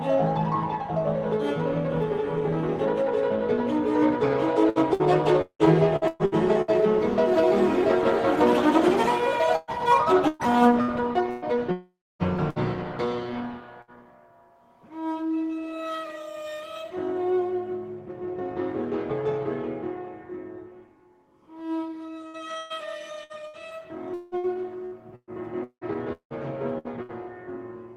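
Audio carried over a call link shows repeated packet loss, the robotic sound, in three stretches: 4.69–6.71 s with eight gaps totalling about 0.6 s, 9.56–11.45 s with four gaps totalling about 0.42 s, and 22.28–27.12 s with fourteen gaps totalling about 1.2 s, the longest single gap 179 ms. Lost packets are patched by extending the last sound, so about a fifth to a third of each stretch is synthetic and choppy, with pieces missing. A spectrogram shows smeared, repeated frames alternating with real detail; the waveform shows the rhythm of repeated cycles breaking up. From 11.72 to 12.22 s comes a long network dropout, the likely cause of about half a second of missing audio. The last sound is stretched into a fading buzz or hiss, then 270 ms of near silence follows before the audio resumes further along. On the waveform this is a decaying tail into a flat line, and on a spectrogram it is a fading blur, then a blank column. 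Bursts of packet loss at 12.50 and 13.82 s each drop about 60 ms. The receiver holds and fades the last sound over each gap, leaving a brief buzz or hiss and a jump in content. Each shows as a short, smooth, decaying patch with an abrupt restart. The spectrum tops out near 12 kHz throughout, which fits Opus at a low bitrate.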